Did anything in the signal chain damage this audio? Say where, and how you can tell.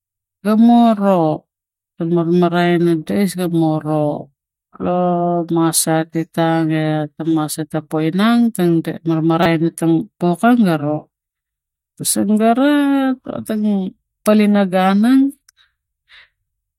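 Yes, at the codec stage. A corrupt frame was decoded in this speech at 9.43 to 9.46 s. It is brief, spanning a couple of frames. Flipped bits gave the decoder wrong gains and codes, so it put energy at the wrong frequencies.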